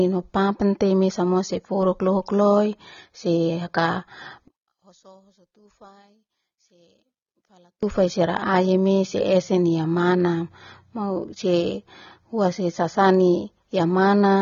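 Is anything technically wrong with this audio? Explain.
Yes. Throughout the speech, AAC compression is likely at work. Nothing reaches above 6.9 kHz. The sound is dull and smeared, pointing to a low bitrate near 24 kbps.

From 4.48 to 7.83 s, one channel is likely inverted. Summed to mono, the matching halves cancel. The speech drops about 33 dB, leaving only a faint trace.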